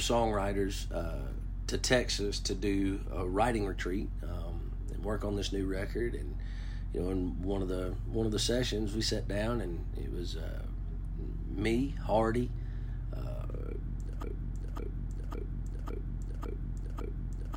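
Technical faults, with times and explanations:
14.23 s to the end: broken-record loop. A 0.55 s fragment repeats exactly, back to back, six times until the clip stops, and the audio that should have followed is missing. This likely comes from a stalled player, encoder or stream resending its last buffered fragment.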